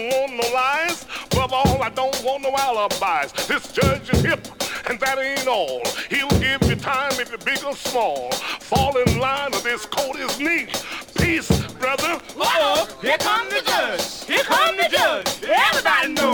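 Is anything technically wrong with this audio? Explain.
No, nothing technically wrong stands out here; it all sounds just as it should.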